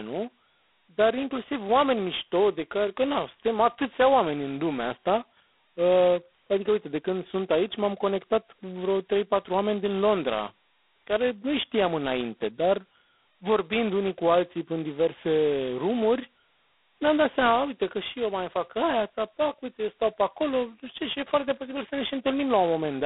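Throughout, the speech passes through G.726 ADPCM coding at what sounds like its lowest 16 kbit/s rate, leaving two bits per sample of prediction error. A harsh, rasping hiss rides on the speech and rises and falls with its level, the band is narrowed to roughly 250 Hz to 3.5 kHz, and nothing reaches above 3.9 kHz.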